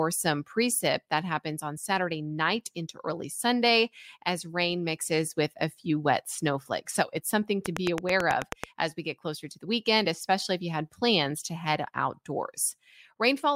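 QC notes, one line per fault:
7.66–8.65 s, train of clicks: after "it's something" and before "as we get closer", a run of about ten near-identical clicks sits on top of the speech at a steady 9.2 per second, peaking about 15 dB above the signal. Because the pulses share one shape and a fixed spacing, they read as mechanical ticking rather than mouth noise. The likely source is electrical interference from nearby equipment or a faulty connection or power supply.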